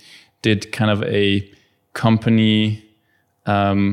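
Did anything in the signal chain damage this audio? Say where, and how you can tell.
No, nothing in the signal chain damaged this audio.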